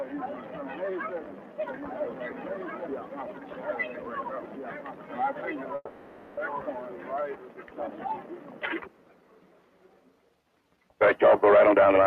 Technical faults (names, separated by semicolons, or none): call audio freeze; jitter buffer speed-up